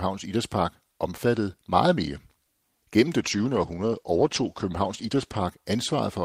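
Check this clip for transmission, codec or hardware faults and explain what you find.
One transmission fault: a call bitrate drop from 3.21 to 5.47 s. The speech turns rough and muffled as the highs fall away, then clears. The call's bandwidth estimate fell, forcing the encoder to code coarsely, which fits a drop from about 32 to 13 kbps.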